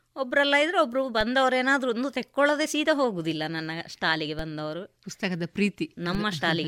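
Speech, with a DC step at 1.21 s, 4.39 s and 6.15 s. Each time the zero line jumps by about -21 dBFS and then decays through a 20 Hz high-pass, giving a low thump.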